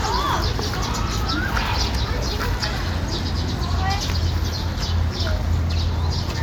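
No technical faults are audible.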